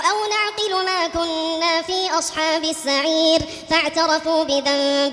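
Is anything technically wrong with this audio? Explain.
Yes. Throughout the clip there is a wrong sample rate fault: everything runs about 1.38 times too fast and sits about 5.55 semitones high, consistent with audio recorded at 16 kHz being played back at 22 kHz without conversion, so the sound is hurried and raised in pitch.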